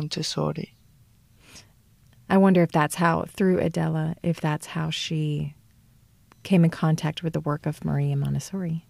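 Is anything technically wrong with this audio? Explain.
No, no technical faults heard.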